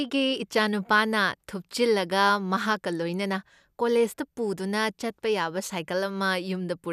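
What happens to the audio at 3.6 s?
At 3.6 s the speech carries on intact, with no dropout, click, distortion or other fault at that point.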